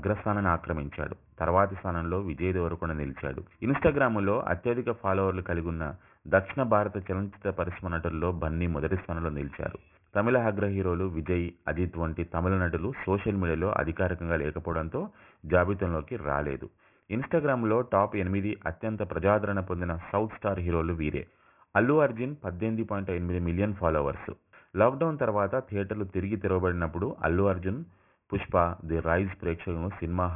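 From start to finish, the audio was brought down to a much lower sample rate without an anti-aliasing filter beforehand, which fits a drop from 48 kHz to 6 kHz. That is aliasing. Everything above the new half-rate of 3 kHz folds back below it at pitches unrelated to the original, landing around 20 dB under the main signal. Bright, hissy content turns gritty and metallic, and the spectrum runs hard right up to the 3 kHz edge.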